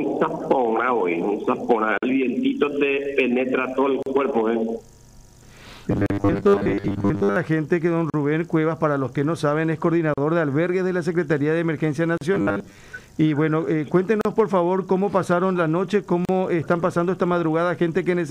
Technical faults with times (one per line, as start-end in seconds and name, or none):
1.98-2.02 gap at a join of encoded pieces
4.02-4.06 gap at a join of encoded pieces
5.91-7.36 robotic sound from repeated short buffers
6.06-6.10 gap at a join of encoded pieces
8.10-8.14 gap at a join of encoded pieces
10.14-10.18 gap at a join of encoded pieces
12.18-12.21 gap at a join of encoded pieces
12.34-12.77 robotic sound from repeated short buffers
14.21-14.25 gap at a join of encoded pieces
16.25-16.29 gap at a join of encoded pieces